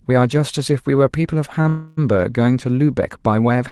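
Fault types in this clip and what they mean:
Short stall from a late packet: A packet arrived late, the jitter buffer briefly ran dry, and the receiver held the last bit of speech until it showed up. It then resumed from the same point, so nothing is lost. Here it occurs at 1.61 to 1.67 s, with about 32 ms stretched, and again at 3.69 s at the very end, with about 23 ms stretched. Each is only a tiny held sound with a slight buzz or dip, unlike a freeze's long fading fill.
Call audio freeze: From 1.69 to 1.99 s the speech stops moving forward and the last sound is drawn out for roughly 285 ms as a buzz or hiss that fades. It never drops to full silence. The speech then picks up exactly where it left off, so a pause has been inserted rather than anything removed. The likely cause is packets held up in transit, emptying the jitter buffer. It differs from a short stall by its length and audible fade.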